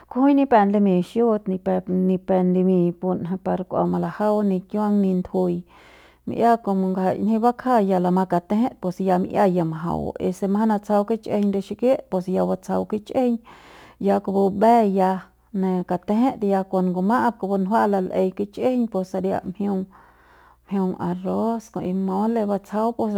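Crude rate conversion from 3.85 s onward: repeated samples, fitting a 44.1 to 48 kHz change, add gritty inharmonic fizz about 35 dB down.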